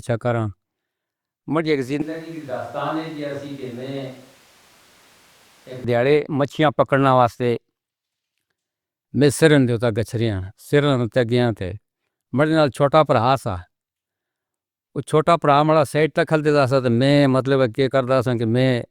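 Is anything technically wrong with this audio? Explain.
Yes. From 2.02 to 5.84 s, after "ماں جی" until "ڈھاڈے مچھیاں پکڑنے واسطے", the speech suddenly turns hollow, thin and about 10 dB quieter, with more room noise. This is likely a switch to a distant microphone.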